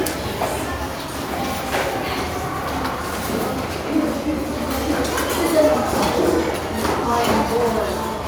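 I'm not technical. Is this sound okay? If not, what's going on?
Yes, nothing in this sound points to a technical problem with how it was recorded or passed along.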